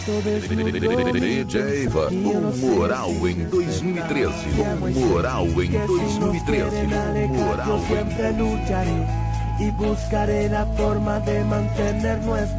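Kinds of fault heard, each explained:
Skip ahead: at 1.88 s playback jumps forward with no gap. About a second of waiting audio was discarded, so the two sides join almost directly.
Jitter buffer speed-up: from 2.12 to 2.71 s, 3.38 to 3.93 s and 6.51 to 7.16 s, the receiver trims tiny pitch-period slices. The audio runs 5 to 6 percent faster at unchanged pitch.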